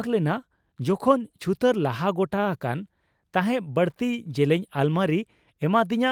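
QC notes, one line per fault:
No faults found in the speech. Nothing here calls for a QC entry.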